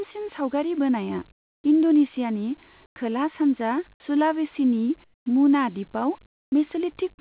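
Comfort noise in place of the background appears four times in this speech: 1.32–1.64 s, between "सावगारि बोनाया" and "इन्द'नेसियानि खोला सानजा सुलावेसिनि"; 2.86–2.96 s; 5.04–5.26 s, after "इन्द'नेसियानि खोला सानजा सुलावेसिनि"; and 6.26–6.52 s. The likely cause is discontinuous transmission, with the receiver synthesising the pauses. The room tone turns flat and featureless, about 19, 7 and 18 dB quieter in the first three gaps and level in the last. On a spectrogram these gaps show as smooth, uniform noise bands that stop below 4 kHz like the rest of the band-limited call audio. On the waveform the first three appear as a steady, lowered floor.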